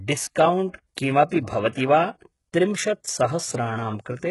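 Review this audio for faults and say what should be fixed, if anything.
The treble throughout this speech clip sounds rebuilt rather than recorded, with gritty, metallic s sounds and nothing above 11.5 kHz. This points to HE-AAC compression, likely at a very low bitrate around 12 kbps, with heavy codec damage. The upper band is copied from lower frequencies and reshaped coarsely, so its harmonics don't line up with those below. A plain low-pass filter would dull the treble instead of leaving this synthetic sheen. To prevent it, encode at a higher bitrate or with a codec mode that codes the full band directly.

Pre-echo appears from 0.69 to 0.74 s, where a hiss of about 47 ms leads into a sharp attack and softens its onset. The codec spread quantisation noise across a whole transform block, so noise sized for the loud attack also filled the quiet moment before it. Unlike a click or dropout, it is a short smear that only comes before an attack and never follows one. 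To prevent it, use an encoder with block switching or temporal noise shaping at an adequate bitrate.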